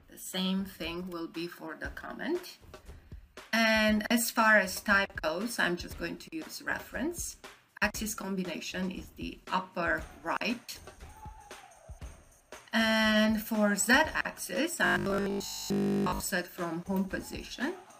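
Robotic sound from repeated short buffers, 14.86 to 16.20 s: the likely cause is audio arriving too seldom, so about 20 ms fragments repeat, forcing a rigid metallic 50 Hz buzz over most of it.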